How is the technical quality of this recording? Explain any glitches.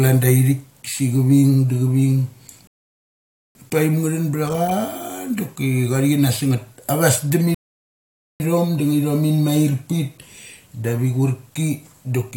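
The speech gets interrupted twice by a rebuffering stall, at 2.67 to 3.55 s and again at 7.55 to 8.40 s. Each time the player runs dry of downloaded audio, drops to silence for roughly 0.88 s and 0.86 s, then picks up exactly where it stopped, so nothing's lost, just delayed.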